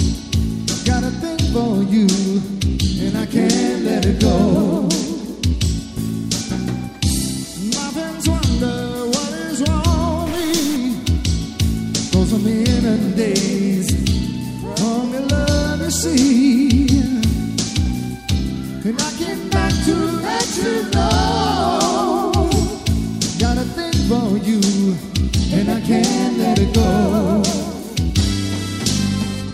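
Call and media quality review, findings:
Likely stuck bit, 10.26 to 10.76 s: one data line or converter bit held at a fixed value, so about half the samples are offset by its weight, a step of about -25 dBFS. Audible as harsh, buzzy distortion over the sound for half a second. Quiet moments within the span fill with noise where small values cross zero.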